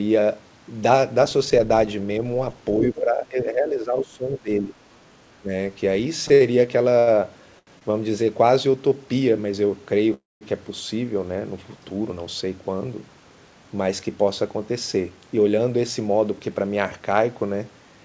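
At 2.81 to 3.01 s a faint second voice, about 10 dB below the talker, comes through, likely the other side's voice leaking through from a loudspeaker the echo canceller did not fully cancel. Unlike a stall, it adds sound rather than holding it. From 2.92 to 4.75 s, and again briefly at 5.41 to 5.5 s, the talker's level drops by up to about 15 dB in pieces, likely speech suppressed in double talk. Here the canceller turned the talker down along with the echo, so the talker loses level where the leak added a voice. Between 6.28 and 7.09 s four short holds, the longest 76 ms, make the audio drag. These repeated stalls (stutter) come from packets arriving late over and over, so the jitter buffer kept running empty. Single short stalls from a late packet follow at 7.59 to 7.69 s (82 ms) and 7.79 to 7.83 s (22 ms). Each stretches one sound once before carrying on. At 10.14 to 10.43 s the sound holds as a fading buzz, then falls silent for about 190 ms, likely a call audio freeze. 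It is longer than a stall and ends in silence, not a held tone. From 14.08 to 16.64 s the jitter buffer speed-up trims about 200 ms of pitch periods, so the audio runs at 109% speed without any change in pitch. Throughout, the G.722 call codec passes nothing above 8 kHz.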